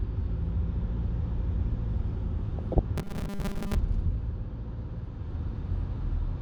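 Across the whole clip the sound is dull and granular, with a gurgling edge: plainly audible MP2 compression, likely from MPEG Layer II coding at a rate around 80 kbps. Too few bits left upper sub-bands switched off or coarsely quantised. A spectrogram shows flickering gaps and a ragged top band.

From 2.59 to 2.79 s DAB burbling breaks out as short blips of noise. Bit errors, at a small fraction of bits, slipped past error correction and corrupted the audio data, putting short noise blips into single sub-bands. This appears as isolated bright blocks on the spectrogram.

Between 2.98 and 3.75 s the sound turns into a rigid metallic buzz at 200 Hz, robotic sound from repeated short buffers. The likely cause is late audio being patched by looping the last 5 ms while most of the real signal is skipped. The waveform shows an identical short cycle repeating, and the spectrogram shows evenly spaced 200 Hz harmonics.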